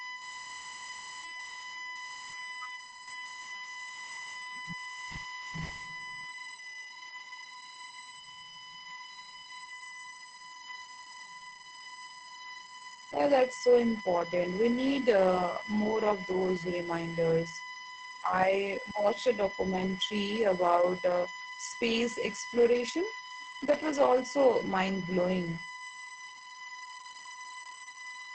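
USB whine runs from start to finish: a steady tone at 1 kHz, strongest at its 2 kHz harmonic, sitting only around 15 dB below the speech. Its fixed pitch matches the 1 ms frame rhythm of a USB bus. The bus draws current in bursts each frame, and that ripple has leaked through a shared power or ground path into the audio, leaving a thin, persistent whistle under every phrase and in the pauses.

Opus voice compression also affects the whole clip, and its damage is plainly audible. The speech has nothing above 8.8 kHz, giving a dull, boxed-in top end, and the voice comes out muffled, slightly hoarse and faintly robotic. That character points to the SILK linear-prediction coder working at a wideband setting, likely starved at a bitrate around 12 kbps with 20 ms frames, so the excitation is coded coarsely and fine vocal texture is lost.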